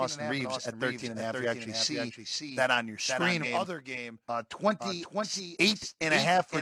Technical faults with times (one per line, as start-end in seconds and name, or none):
0.00-6.62 doubled audio track
3.39-3.44 stream segment skipped